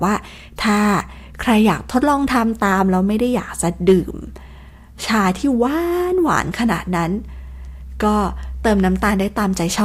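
At 3.88 to 3.93 s a brief crackle sits on a loud peak of the speech, a short roughness rather than sustained fuzz. This is hard clipping: the signal overshoots a stage's limit by about 3 dB, so the peaks are cut flat, adding high harmonics.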